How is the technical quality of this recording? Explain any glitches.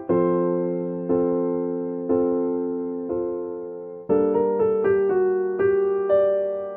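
No glitches can be heard anywhere in this recording.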